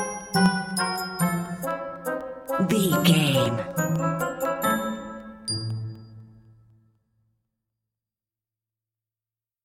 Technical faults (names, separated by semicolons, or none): periodic USB or driver dropouts